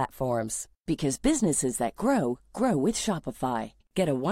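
From start to finish, the converter's sample clock wanders, so each sample of this speech is captured a little early or late, on the order of a microsecond or two. That is sample clock jitter. Because the timing error matters most where the waveform changes fastest, it leaves a fine hiss or roughness riding on the voice, roughly 35 dB below it, strongest on loud and bright sounds such as sibilants and dropping away in the pauses.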